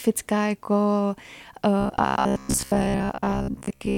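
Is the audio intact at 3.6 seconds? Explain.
No. Robotic sound from repeated short buffers runs from 1.80 s to the end of the clip, likely because audio arrived too seldom and roughly 15 ms chunks were replayed for much of the time, imposing a rigid, metallic buzz near 67 Hz over the speech.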